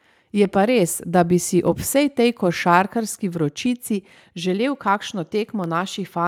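A speech recording with clicks recurring every 0.66 s from 0.35 to 5.64 s, about ten in all. That steady spacing marks clock drift buffer slips rather than random dropouts, likely from two clocks differing by roughly 300 ppm, slipping a few samples each time.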